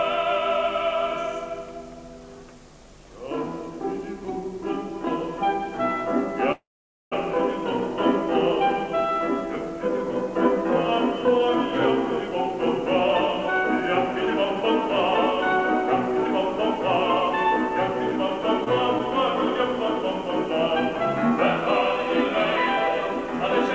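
From 6.52 to 7.15 s the sound stretches into a fading buzz or hiss, drops to silence for about 0.49 s, then resumes exactly where it stopped. This is a call audio freeze, likely from packets delayed in transit so the jitter buffer ran dry. Nothing is lost, but everything afterwards arrives about 0.6 s late.

At 18.64 to 18.69 s there is a brief smear. This is short concealed packet loss: about 40 ms of audio never reached the decoder in time, so the receiver extended the preceding sound for 20 ms and blended back, pulling the timing slightly earlier. All of this passes through a G.722 call path at 64 kbps, with nothing above 8 kHz.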